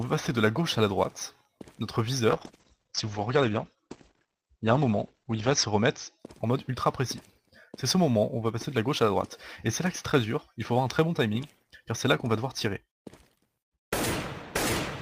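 From 2.34 s to 6.25 s there is a call bitrate drop. The encoder lost bits, which fits a fall from 32 to 10 kbps, and audio bandwidth narrows from 20 kHz to 8 kHz. For about 3.4 s the sound is muffled and rough before recovering.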